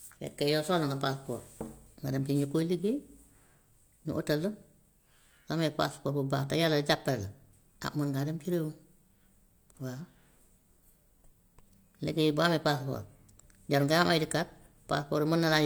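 No technical faults are audible.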